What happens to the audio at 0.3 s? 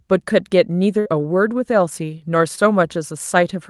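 Nothing goes wrong at 0.3 s: the speech there is intact, carried through the call path's codec without any dropout, glitch or distortion at that moment.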